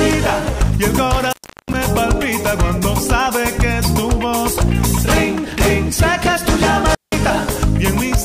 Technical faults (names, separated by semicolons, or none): intermittent contact